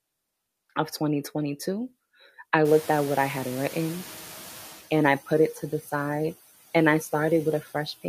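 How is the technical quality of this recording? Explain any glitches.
The recording has clear noise-suppression problems: processing artifacts throughout, a slow reaction to a jump in background noise, and one brief spot where speech is clipped away.

Noise suppressor artifacts run through the whole clip. The suppressor pulls down the bands it judges to be steady noise by about 13 dB, frame by frame, so the noise sinks between phrases and rises under the words. On a spectrogram the noise floor looks patchy and mottled, not smooth.

Noise suppressor catching up occurs from 2.64 to 4.81 s, ending just before "and I put it". The room noise jumps by about 23 dB near 2.5 s and the suppressor's estimate lags, reducing it by only about 9 dB at first, then settling over 2.17 s. The waveform shows a raised floor that gradually shrinks.

Speech cut by the noise suppressor occurs from 5.82 to 5.91 s, right after "put it to the". 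The suppressor mistakes part of the speech for noise and turns it down by up to about 8 dB for roughly a tenth of a second, so it sounds swallowed. The spectrogram shows a short, faint gap in the speech energy.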